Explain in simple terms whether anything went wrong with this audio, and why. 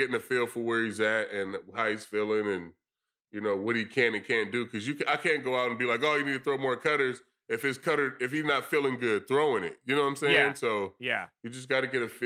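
Nothing went wrong here: the speech comes through steadily all the way, with no glitches or dropouts to point to anywhere in the recording.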